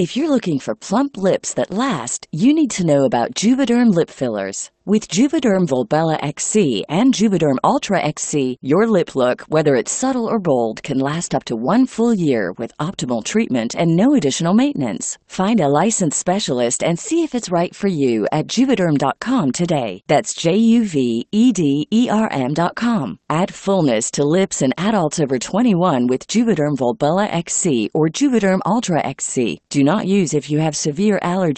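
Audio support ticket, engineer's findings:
Lost packet rebuilt from error correction, four instances: 1.19–1.21 s (between "you're looking for plump" and "that last you need"), 5.53–5.59 s (two packets, about 40 ms rebuilt), 11.13–11.15 s (between "subtle or bold can" and "up to one full"), and 22.69 s. Probable component is the network/jitter buffer. 20 ms packets dropped and were replaced by the low-bitrate in-band FEC copy carried in the next packet. No gap or dropout, but each spot briefly sounds rougher and noisier. The call path sits underneath all of this, with audio band-limited to about 8 kHz, consistent with Opus at around 24 kbps.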